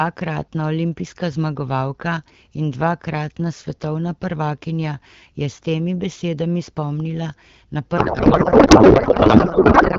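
At 7.97 s, just after "temi besedami spomnila na", a codec payload misread sets in: octet-aligned AMR-WB frames are parsed as bandwidth-efficient, misplacing every field, so speech dissolves into garbled warbling noise through the clip's end.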